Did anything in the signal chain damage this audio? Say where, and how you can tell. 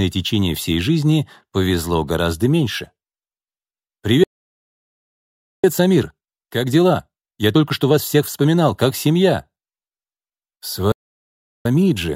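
Yes. At the playback stage, the player likely ran short of data or had its output thread blocked, producing two playback stalls. The sound cuts off mid-flow and falls silent from 4.24 to 5.64 s, about 1.4 s, and again from 10.92 to 11.66 s, about 0.73 s.

Each stall is followed by time-compressed catch-up, where the player trims its backlog by cutting out short pieces and cross-fading across the joins. From 5.64 to 8.64 s the audio runs about 1.15 times fast, and from 11.66 s to the end about 1.25 times. Pitch stays normal.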